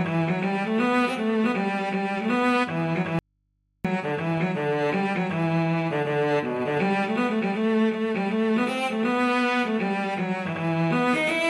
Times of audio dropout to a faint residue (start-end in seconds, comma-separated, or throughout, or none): 3.19-3.85